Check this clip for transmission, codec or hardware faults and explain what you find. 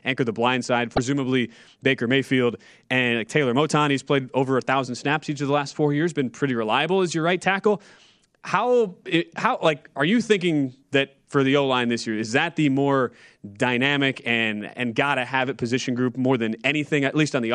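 One fault appears in this speech clip. A likely broken MP3 bit reservoir occurs from 0.96 to 0.98 s: data was cut out, so the following frame reached back into the reservoir and decoded another frame's bytes. The speech jumps ahead with a brief glitch, about one 26.1 ms frame long.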